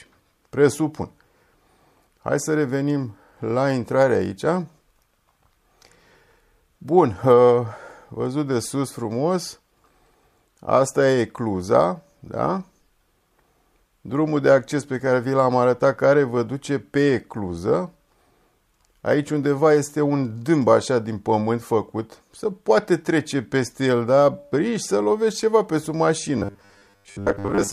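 From 26.38 s to the end at 27.72 s, the audio collapses into robotic sound from repeated short buffers: a rigid, metallic buzz at a steady 100 Hz sits over the sound while the sound's overall shape still comes through loosely. The likely cause is new audio arriving too seldom, so playback keeps looping a stretch of about 10 ms and skips the real material for roughly two thirds or more of that final section.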